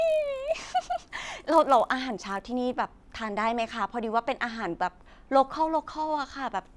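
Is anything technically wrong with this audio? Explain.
Yes. From 0.0 to 2.76 s the speech carries a steady 50 Hz buzz that follows the signal. This is a resampler restarted on every block: each 20 ms block was converted separately, likely in a 48 kHz to 24 kHz conversion, leaving a small error at every block edge.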